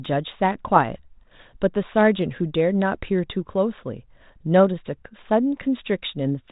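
No technical faults are audible.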